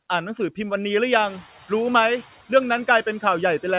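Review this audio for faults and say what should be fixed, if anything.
Noise suppressor catching up, from 1.12 to 1.41 s: the room noise jumps by about 18 dB at around 1 s, and the suppressor's noise estimate still reflects the quieter background, so the new noise passes through with only about 4 dB of reduction. Over roughly 290 ms the estimate adapts and the noise sinks, leaving it about 23 dB below the speech, all within a band that stops at 4 kHz. To prevent this, use a suppressor with faster noise-floor tracking for sudden level rises.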